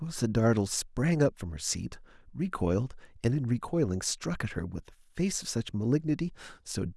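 No technical faults are audible anywhere in the recording.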